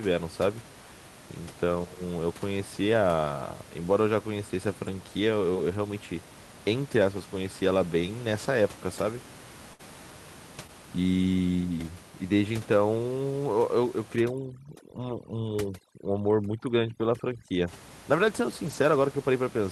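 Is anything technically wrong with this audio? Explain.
Yes, several network and processing faults are audible in this speech.

At 1.75–1.85 s, 12.52–12.54 s and 18.66–18.76 s the sound turns briefly rough and grainy without dropping out. These are lost packets rebuilt from error correction: the decoder played low-bitrate backup copies carried in the following packets, covering about 60, 20 and 60 ms.

At 9.73–9.81 s the sound freezes into a fading buzz or hiss, then jumps ahead. This is a burst of packet loss: about 55 ms was filled by extending the last sound, and about 60 ms of real audio never arrived.

At 10.67–10.70 s there is a brief smear. This is short concealed packet loss: roughly 13 ms was patched by continuing the preceding sound before blending back.

From 14.16 to 17.68 s the background, room noise about 19 dB below the speech, drops and breaks up into twinkling specks. This is overdone noise removal, which cuts frequency bands near its noise estimate along with quiet speech detail.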